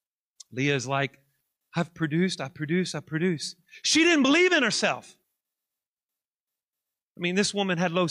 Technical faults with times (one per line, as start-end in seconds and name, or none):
none